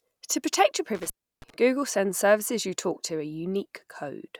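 Right after "protect your", from about 0.95 to 1.54 s, there's an intermittent contact: a loose connection drops the speech for roughly 323 ms, crackling as it breaks and remakes.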